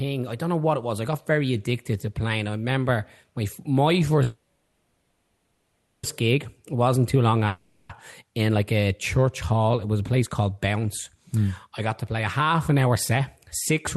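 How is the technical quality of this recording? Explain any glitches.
The recording has three glitches, all network-related. They sit on top of a call-codec path whose coding noise and upper band edge near 12 kHz fit Opus at roughly 32 kbps.

From 4.23 to 6.05 s, right after "I remember my my", there is a call audio freeze of about 1.8 s. Delayed packets most likely emptied the jitter buffer, so the receiver stretched the last sound into a fading buzz that settles into low steady noise. Speech resumes intact but later. A spectrogram shows smeared, decaying harmonics, then a faint flat band.

From 7.47 to 7.91 s, between "too long" and "in like a church", a long network dropout removes about 0.42 s of audio, likely from lost packets. A concealment buzz fades, and the speech jumps ahead. The waveform shows a shrinking, repetitive stretch and an abrupt restart.

From 12.71 to 13.20 s, after "to play a half", a jitter buffer speed-up plays the audio at about 110% speed without changing pitch. 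The receiver trimmed pitch-period slices totalling about 70 ms, which makes the speech sound briefly hurried. A spectrogram shows compressed syllable timing with unchanged harmonic spacing.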